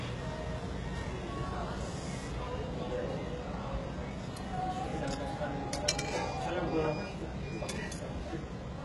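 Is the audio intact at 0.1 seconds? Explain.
No. Throughout the clip, including 0.1 s, the treble sounds gritty and metallic, likely from heavy HE-AAC compression at a rate near 12 kbps, with upper bands rebuilt from copied lower ones. A spectrogram shows repeated-looking treble patterns ending abruptly at 11.5 kHz.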